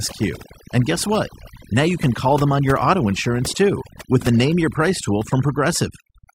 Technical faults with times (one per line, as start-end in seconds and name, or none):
0.00-6.35 overdone noise removal